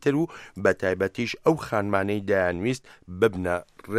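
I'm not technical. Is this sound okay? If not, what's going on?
Yes, nothing here calls for attention; there are no audible faults.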